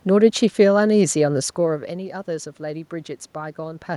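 No technical faults are audible.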